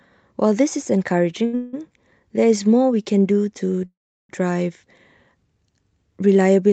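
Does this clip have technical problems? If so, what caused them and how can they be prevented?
Yes, the speech has two kinds of fault.

Short stall from a late packet, 1.45 to 1.55 s: a packet arrived late, the jitter buffer ran dry, and the receiver stretched the last sound for about 77 ms before resuming where it left off. Nothing is lost, but that sound is held too long with a faint buzz. On a spectrogram, the harmonics run flat and unchanging for that stretch. Prevention: a slightly deeper adaptive jitter buffer absorbs late packets of this size.

Call audio freeze, 1.55 to 1.75 s and 3.86 to 4.31 s: the first event follows directly from the stall, prolonging the held sound for about 179 ms as a fading buzz without going silent. The second fills about 436 ms, and roughly 360 ms of it is silence before the speech picks up exactly where it stopped. The cause is likely packets held up in the network, emptying the buffer. 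A spectrogram shows smeared, decaying bands, then a blank gap. The waveform shows a tapering tail, then a flat line. Through both, the Opus call codec's upper limit near 8 kHz remains visible, which fits a band-limited setting. Prevention: reduce network congestion or prioritise call traffic, and let the jitter buffer grow during bursts.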